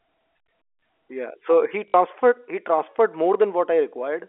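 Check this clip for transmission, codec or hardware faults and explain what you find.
One transmission fault stands out: packet loss with the last packet repeated, from 1.88 to 1.94 s, lasting 60 ms. The receiver kept replaying the last packet it had until fresh audio arrived. The repeats seldom line up with the pitch, and the run buzzes at the packet rate. The pattern fits three lost 20 ms packets and a 50 Hz buzz. The result is a brief robotic stutter, not the silent gap a plain dropout leaves. The narrowband G.711 telephone coding underneath is heard throughout as a band-limited phone sound.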